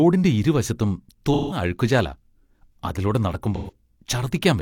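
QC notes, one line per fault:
1.33–1.61 s: AAC frame loss with concealment, a 0.28 s smeared, noisy patch where the decoder reuses the last good spectrum, unlike a dropout's clean silence.
3.56–3.71 s: AAC frame loss with concealment, a shorter 0.15 s phasey smear, which fits about three lost frames patched from the previous spectrum rather than muted.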